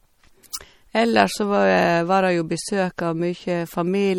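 Throughout, the speech carries plainly audible watery, swirly artefacts and nothing above 18.7 kHz, likely from MP3 compression at a low bitrate around 48 kbps.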